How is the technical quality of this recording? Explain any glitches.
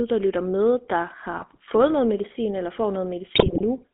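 Quality is limited by narrowband mobile-phone coding, with two bursts of digital corruption.

GSM full-rate codec, throughout: the speech is squeezed into a 200 Hz to 3.5 kHz band and rebuilt from a vocal-tract filter excited by a sparse, regularly spaced pulse train, which fits the 13 kbps full-rate scheme. Because only a fraction of the excitation detail survives, the voice carries a plainly audible buzzy, gravelly roughness, and everything above 3.5 kHz is simply absent, leaving it muffled and boxy.

GSM bit errors, 1.38 to 1.60 s (after "der lytter med der", before "fået noget medicin eller") and 3.34 to 3.65 s (after "noget medicin eller får"): corrupted bits reached the decoder, scrambling the filter, pitch and gain values for a run of frames. Each frame is then rebuilt with the wrong spectral shape or level, so the voice breaks up into squawks, pops and gargling for a fraction of a second. 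The second burst is longer and harsher.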